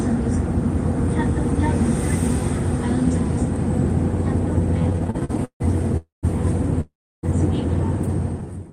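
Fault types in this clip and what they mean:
Repeated stalls (stutter): Packets kept arriving late, so playback ran dry fifteen times between 4.79 and 5.95 s. Each stall is filled by stretching the last sound, the longest about 152 ms, so nothing's lost but the audio drags and hiccups.
Call audio freeze: Twice the sound hangs as a fading buzz and then drops out, for about 0.26 s at 5.97 s and 0.42 s at 6.81 s, before picking up where it left off. That's likely packets held up in transit, emptying the jitter buffer.
Jitter buffer slow-down: From 8.39 s to the end, the receiver repeats tiny pitch-period slices to rebuild its reserve, so the audio runs at about 82% speed without any pitch change. It's drawn out, sitting under the smooth fade-out that begins around 8 s.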